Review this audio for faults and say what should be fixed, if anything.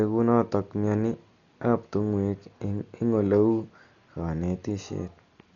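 Throughout the speech the band stops at 7 kHz, leaving it dull, and the voiced sounds carry a rough, fluttering noise that sits around the tonal parts. This is likely Dolby Digital compression run at a very low bitrate, something near 40 kbps. Starved of bits, the encoder narrowed the band and left many frequency lines without mantissa data, and the decoder filled those lines with dither noise, heavily degrading the result. To prevent it, encode at a substantially higher bitrate or work from an uncompressed source.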